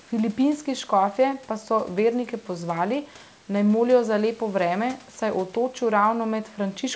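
No technical faults can be heard anywhere in the speech.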